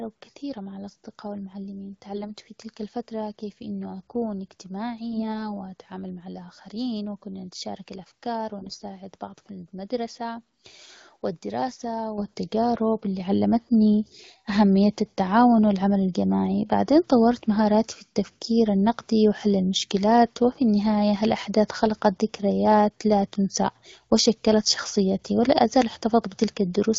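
Speech over an AMR-WB link, which at 12.65 kbit/s leaves only light codec colouring. The main trouble is AMR bit errors, in three bursts: 2.16 to 2.26 s just before "في تلك الفتره كيف", 5.12 to 5.50 s just before "وأتعامل مع الآخرين وكنا", and 8.59 to 8.84 s right after "الآخرين وكنا نتشارك الأفكار". The weakly protected bits get flipped, so the excitation pulses and the fine pitch, gain and spectral values go wrong. Pitch and level hold roughly, but the voice turns hoarse and gargly, getting worse with each burst as the error rate climbs from a couple of percent to around ten. Then the microphone volume gets stepped up twice, at 12.18 s by about 8 dB and at 13.2 s by about 5 dB. That's the call software nudging the input gain, so voice and background jump louder together in one go.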